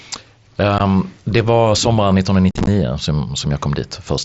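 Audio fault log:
0.78 s, unconcealed Bluetooth headset packet loss: a 15 ms hole right before "det var sommaren". A couple of voice packets between headset and phone never arrived, and nothing patched over them, so the sound just drops out with hard edges.
2.51–2.68 s, unconcealed Bluetooth headset packet loss: just after "det var sommaren", about 98 ms goes missing in bits across 165 ms, the longest gap 45 ms. It comes out as a rough, chopped crackle over the light mSBC grain.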